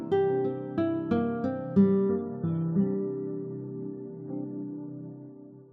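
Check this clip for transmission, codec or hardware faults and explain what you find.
One fault is present. From 2.09 s to 5.72 s, an adaptive stream at a lower bitrate, consistent with a drop from MP3 128 to 16 kbit/s, switches abruptly and without a gap. The sound turns dull and artefact-laden, and a spectrogram shows a sharp flat ceiling at 3.6 kHz.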